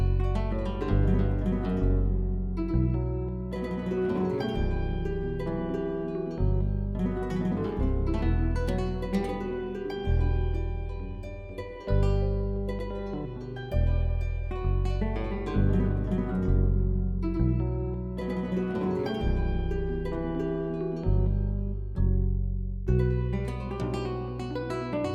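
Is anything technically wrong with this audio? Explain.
No, there is nothing technically wrong with this audio.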